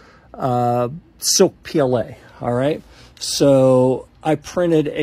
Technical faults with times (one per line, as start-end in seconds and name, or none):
1.53-5.02 adaptive stream at a lower bitrate